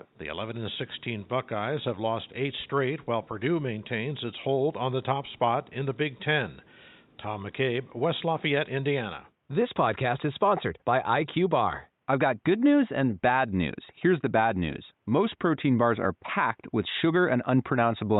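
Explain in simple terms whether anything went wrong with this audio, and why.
Nothing went wrong with this audio. At no moment does the sound behave in a way that points to a technical problem.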